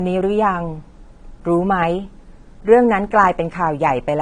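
Throughout, the speech shows low-bitrate audio saved at a high bitrate: it was likely squeezed by an earlier low-bitrate encoder, pointing to AAC-LC around 32 kbit/s, then re-saved as high-bitrate MP3. Nothing exists above 9.7 kHz, leaving the speech dull and band-limited.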